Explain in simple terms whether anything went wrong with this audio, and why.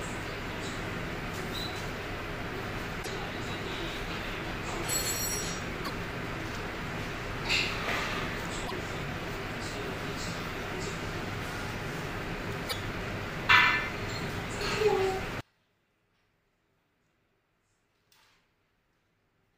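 Yes, two things go wrong. Damaged data in a compressed stream causes brief chirps or blips, each under a tenth of a second, at 2.99, 5.81, 8.64 and 12.66 seconds. Each one is a glitch where the decoder misread bad bytes and hunted for its place again.

From 15.4 seconds to the end, the sound suddenly becomes very faint, with the centre almost gone. The likely cause is one channel inverted: when the two sides are combined, what they share cancels out, unlike an ordinary volume drop that keeps everything equally.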